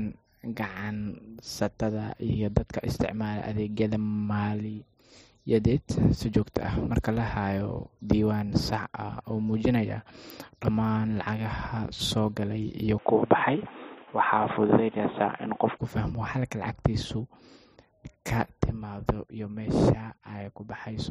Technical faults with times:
12.98-15.77 input switched to a poorer device

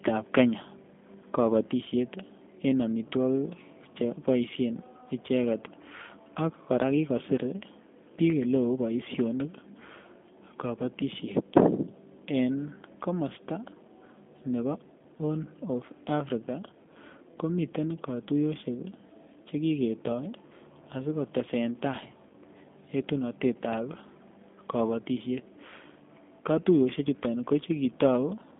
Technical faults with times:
0.00-28.60 G.729 codec

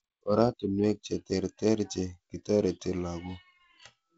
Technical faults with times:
none

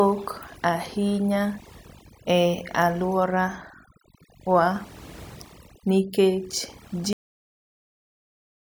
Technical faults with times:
0.00-8.69 overdone noise removal
7.13-8.69 cut-off end

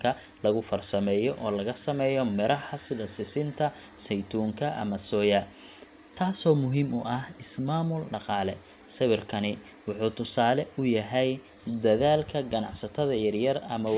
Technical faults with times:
none

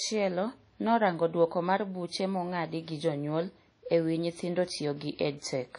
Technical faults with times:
0.00-5.79 WMA compression

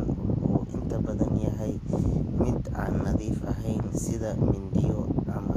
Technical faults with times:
0.00-5.57 Vorbis compression

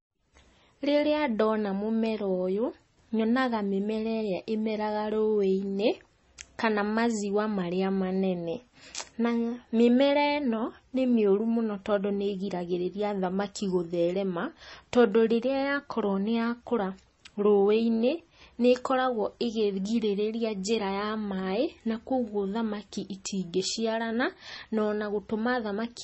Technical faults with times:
0.00-26.03 MP3 compression

